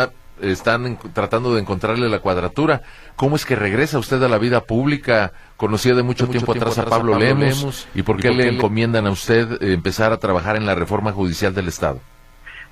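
From 6.2 s to 8.62 s the audio has a doubled audio track. A second copy of the same sound runs about a fifth of a second behind the first, roughly 5 dB quieter. It is full-band and dry, with no fading tail or room colour. It cuts in and out abruptly at both ends. The likely cause is the signal being captured twice, once through a slower path, and mixed back together out of step.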